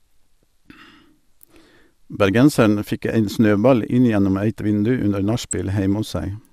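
A speech recording with DAB burbling from 5.30 to 5.53 s. Short blips of noise appear in single sub-bands. Weak reception let bit errors through, about 0.3 percent, corrupting MP2 audio data. Around a dozen frames are damaged.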